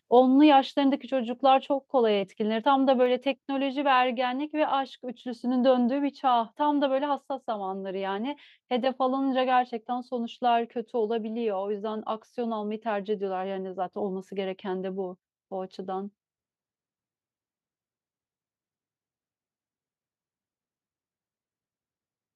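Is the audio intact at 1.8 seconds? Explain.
Yes, at 1.8 seconds the speech is intact, with no fault present at that moment.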